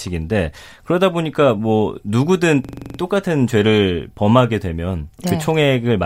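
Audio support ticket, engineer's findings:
System hang loop, 2.65–2.99 s: one 43 ms slice repeats 8 times as a 23.4 Hz stutter. Host or driver stalled while hardware replayed its ring buffer, which fits a 2048-sample buffer.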